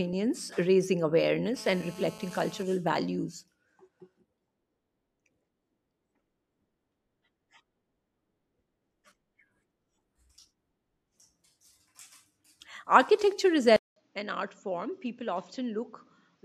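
From 1.56 to 2.63 s, a nearby 2G handset on a call transmitted in bursts 217 times a second, and the audio circuitry rectified those radio pulses. The result is GSM phone buzz: a steady, hard, raspy 217 Hz tone with many harmonics, about 22 dB below the speech.

At 13.76 s the recording likely switched its input to a poorer device that passes nothing above 7.6 kHz. After a 200 ms silence, the speech returns duller and roughly 10 dB quieter, over a new noise floor about 40 dB down, and stays that way to the end.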